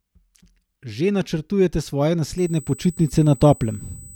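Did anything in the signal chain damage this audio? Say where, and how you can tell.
Yes. From 2.38 s, just after "načrtujete svoje", a steady USB whine at 8 kHz enters and runs to the end of the clip, roughly 25 dB below the speech. This is an analogue wiring fault: current drawn in the USB bus's 125-microsecond microframes leaks through power or ground into the audio path. The exact 8 kHz pitch separates it from mains hum at 50 or 60 Hz, and its fixed pitch separates it from acoustic noise.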